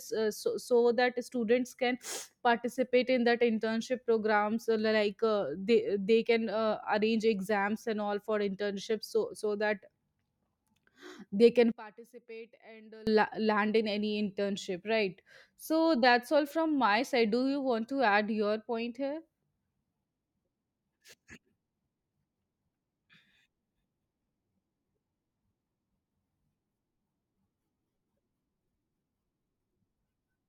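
Right after "they can", from 11.72 to 13.07 s, the speech drops away by about 24 dB for roughly 1.35 s, leaving a faint trace before it snaps back. That collapse is what you'd get with one channel inverted: if one side of the stereo pair likely had its polarity flipped, everything centred cancels when the channels are summed, so only their small differences survive.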